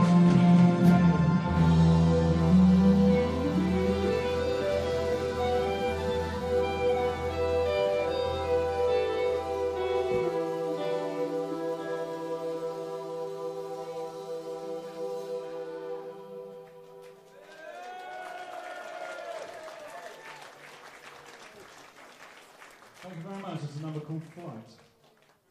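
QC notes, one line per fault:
No faults heard anywhere in this clip.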